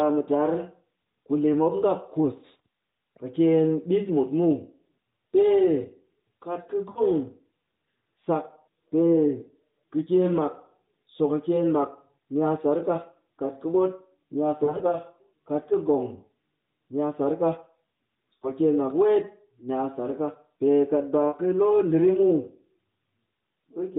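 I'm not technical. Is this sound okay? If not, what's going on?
No. Lost AMR speech frames occur at 6.90 to 7.02 s (after "kat ka"), 14.64 to 14.98 s (after "ka ɓot ni a"), 18.34 to 18.53 s (before "mak weet ni a") and 21.28 to 21.38 s. Radio errors destroyed short pieces of the phone signal, so the decoder briefly stretched the last good sound, causing quick dips or warbles.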